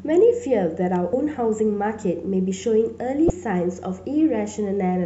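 At 1.10 to 1.13 s, and again at 3.27 to 3.30 s, the speech is broken by a short glitch, each lasting only about a thirtieth of a second. Both are damaged data in a compressed stream: some of the encoded audio came through wrong, so the decoder couldn't make sense of those frames, lost its footing, and had to hunt for the next valid frame header before clean playback resumed.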